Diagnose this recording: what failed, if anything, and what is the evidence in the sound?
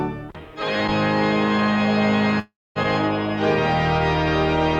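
The failure is at the network stage: a long network dropout between 2.39 and 2.78 s. At 2.39 s the sound stops progressing and the last fragment is stretched into a fading buzz. That fade decays into roughly a quarter second of silence before the audio resumes at 2.78 s with about 360 ms of material absent. The likely cause is a run of lost packets that the receiver's concealment papered over briefly, then muted.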